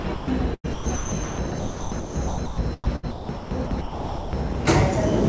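From 0.00 to 0.28 s, 0.54 to 2.58 s and 2.84 to 4.55 s, sound chopped by the voice detector, likely, swaps real sound for steady synthetic comfort noise (199 ms, 1.24 s, 0.99 s), never true silence, unlike dropouts. The call path's G.722 coding leaves nothing above 8 kHz.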